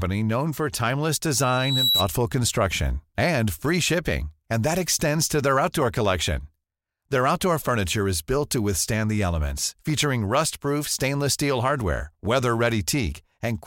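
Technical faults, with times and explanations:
1.41 to 2.09 s, loudspeaker feedback squeal: a 3.9 kHz tone swells over about half a second to roughly 5 dB above the speech, as the mic-to-speaker loop runs away.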